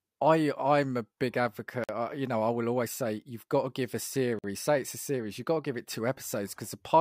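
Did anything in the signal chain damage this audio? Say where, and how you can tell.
Yes. A gap between chunks, from storage or playback, leaves 50 ms of silence at 1.84 s, after "I'm a big advocate", and 4.39 s, after "got to give a", 2.5 s apart. Silence inserted at each join shows as blank vertical stripes on a spectrogram and abrupt flat silences on the waveform.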